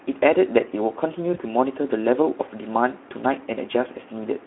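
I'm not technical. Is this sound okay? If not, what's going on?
No, it isn't quite okay. The whole clip runs through the Speex codec, an older squeezed-down speech format from internet calls and game chat. The speech sounds noisy and hoarse, and it's cut down to phone-line width, so it's thin with no crisp top end.

There's also a short glitch from VoIP packet loss concealed by the speech codec, at about 1.33 to 1.39 s. Around 20 ms of audio went missing, and the decoder guessed the gap by stretching what came just before. You hear a brief stretched-out smear that fades, and the speech stays off for a moment afterwards.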